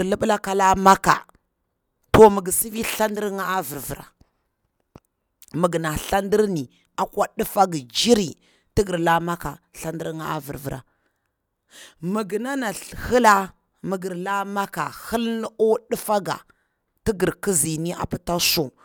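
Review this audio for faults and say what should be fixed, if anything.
Nothing here needs fixing; no faults are audible.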